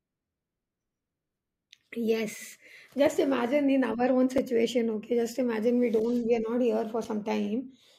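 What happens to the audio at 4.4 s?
At 4.38 s the speech drops out for a block of digital silence about 5.3 ms long. The output buffer was likely not filled in time, so a run of samples was written as zeros. The length fits a 256-sample buffer. Because the signal jumps to zero and back with no fade, the two hard edges fall so close together that the hole is too short to hear as a gap and comes across as a tick or dip.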